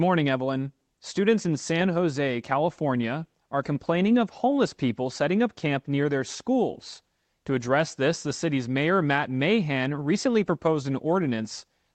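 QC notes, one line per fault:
No faults heard.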